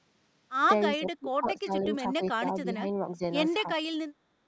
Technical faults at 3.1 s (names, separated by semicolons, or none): speech suppressed in double talk